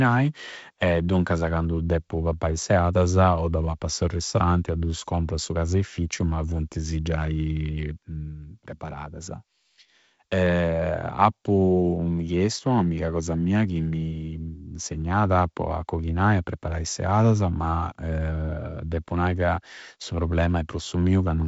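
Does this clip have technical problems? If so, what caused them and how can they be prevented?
No, there are no technical problems in this clip.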